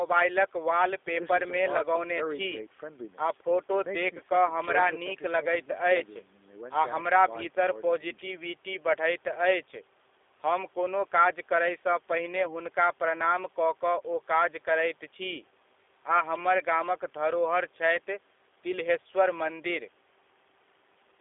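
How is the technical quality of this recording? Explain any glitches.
The speech is intelligible but carries a steady coded-telephone quality. From start to finish it sounds thin, slightly rough and synthetic, with nothing below about 300 Hz or above 3.6 kHz. That is the G.729 codec: each 10 ms frame is rebuilt from a vocal-tract filter, a pitch predictor and a few pulses, at a rate that points to 8 kbit/s, so fine detail is replaced by a buzzy approximation.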